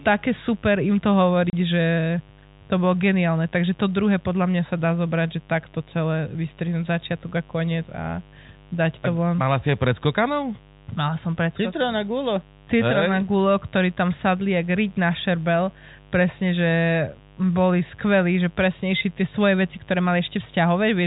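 A steady, raspy buzz runs under the speech from the very start to the end of the clip, sitting roughly 30 dB below the speech. This is mains buzz. The fundamental is 50 Hz, but its harsh edge comes from a dense ladder of harmonics reaching well up the spectrum. That points to sharp switching spikes from a dimmer, a rectifier or poor shielding getting into the signal path twice every mains cycle, instead of a smooth hum.

At 1.5 s the speech suddenly drops to dead silence for 30 ms, with hard edges where the sound cuts out and snaps back. This is packet loss filled with silence. A chunk of the stream never arrived, and the receiver played nothing in its place instead of smoothing over the gap. A hole of that length fits a single lost packet. The band-limited, telephone-like tone of the G.711 coding carries through around the gap.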